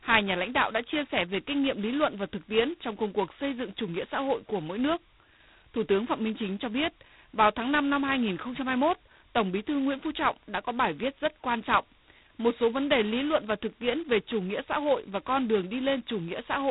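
From start to finish the speech has been through G.726 ADPCM, and hard. That codec sends only a coarse difference from an adaptive guess at each sample. Here the guesses leave a heavy, rasping hiss that swells and fades with the speech level, which fits the 16 kbit/s mode at just 2 bits a sample. Nothing gets through above 3.9 kHz either, so the top end is completely gone and everything sounds boxed in.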